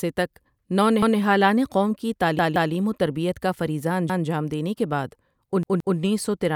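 A repeated buffer occurs at 1.02 s, 2.39 s, 4.10 s and 5.63 s. New audio arrived late, so the device replayed its last block of about 171 ms, which fits an 8192-sample buffer. The repeats are heard as hard-edged stutters with no audio missing: once before "قوم کی", twice at 2.39 s, once after "وتربیت کا فریضہ", and twice after "دینے کے بعد".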